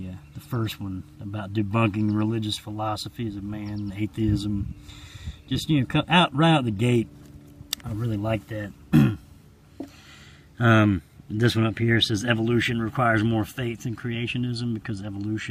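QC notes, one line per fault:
No faults found in this clip.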